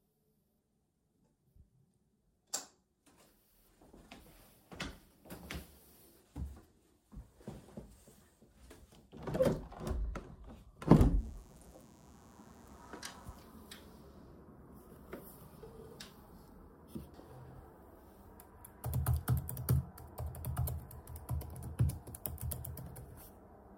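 A recording of everyday sounds with a burst of mains buzz from 11.16 s to 13.45 s. The buzz is steady and raspy. It sits well below the main sound, roughly 30 dB down. Its base is 60 Hz. Sharp spikes enter twice per mains cycle, from a dimmer, a rectifier or a missing shield. Those spikes carry harmonics of 60 Hz up into the kilohertz range. That is why it rasps rather than hums.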